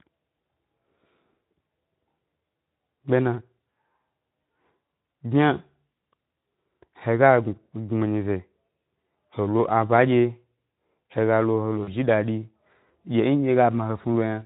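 Speech, carried through a Speex codec whose light coding shows only as mild hoarseness, has two short dropouts from VoIP packet loss concealed by the speech codec. At 6.99 s, a gap of about 20 ms is filled with a buzzy tone or coloured noise that fades. At 11.83 to 11.89 s, between "lo he lo" and "ji dadi", a gap of about 40 ms gets the same treatment. The decoder extends the last pitch and filter with falling gain, so the sound turns weak or distorted before recovering.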